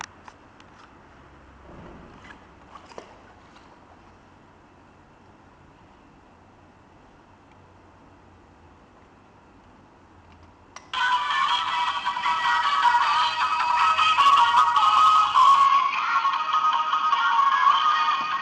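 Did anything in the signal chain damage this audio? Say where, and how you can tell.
Yes. At 15.66 s the sound goes duller and stays that way to the end. Nothing above about 6.7 kHz survives, so the top end is clipped off like a narrower pickup. A faint new background noise also comes in, roughly 45 dB down. There's no gap and no real level jump at the change. That pattern most likely points to an input switched to a poorer device at the driver stage, with capture rerouted mid-take to a lower-bandwidth mic path.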